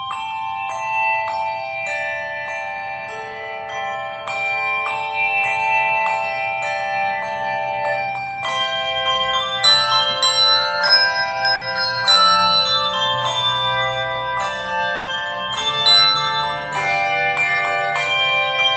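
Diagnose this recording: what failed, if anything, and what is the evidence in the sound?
The failure is in the network stage: two bursts of packet loss. The first runs from 11.55 to 11.63 s, about 60 ms. The second runs from 14.95 to 15.09 s, about 120 ms. In each gap the receiver stretches the last sound it had and fades it, giving a held buzz or a thinning hiss. The audio then jumps ahead, and the stretch of sound that was lost never returns. Both gaps sit over an Opus call path limited to about 8 kHz.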